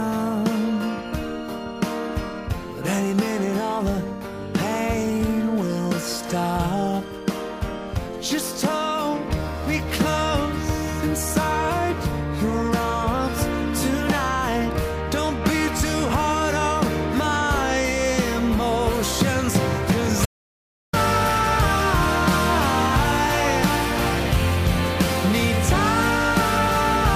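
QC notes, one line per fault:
20.26–20.93 s, audio dropout to silence: sound cuts off abruptly into 0.68 s of silence with no room tone, likely from input loss while recording continued.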